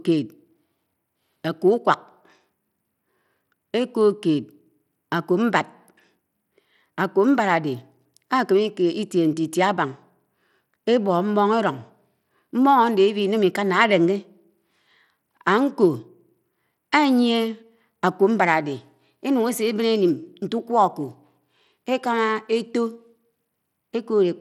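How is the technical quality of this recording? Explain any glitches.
The recording carries plainly audible codec damage across its whole length. Bluetooth SBC compression, present throughout, is the likely cause. A small bit budget, consistent with about 96 kbps, starves the upper sub-bands and coarsely quantises the rest. The result is gritty speech, flickering treble and aliasing, with nothing above 20.9 kHz.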